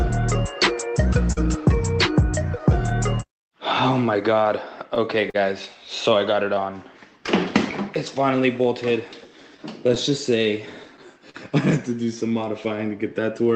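The audio has come through a call path, and its top end stops near 8 kHz, which fits Opus at a low bitrate of about 20 kbps. The main fault is clock drift between sender and receiver. The sender's clock runs about 3% slow, so the receiver's buffer keeps draining. Repeated timing corrections follow from 0.88 s to 13.44 s. The receiver stretches the audio to about 99% speed, adding roughly 150 ms in small, uneven steps. Twice the buffer runs dry completely. Each time a short stall from a late packet holds the last sound too long. The first hold lasts 44 ms, at 1.32 to 1.39 s. The second lasts 40 ms, at 5.30 to 5.36 s. Nothing is lost either time, but the held sound carries a slight buzz or dip. Scattered short gaps also appear, each patched by continuing the previous sound. About three fall between 2.59 and 3.31 s, and about three more between 7.26 and 7.97 s. Around five occur from 9.25 to 11.36 s, the longest near 40 ms. 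They come through as brief ticks and smears.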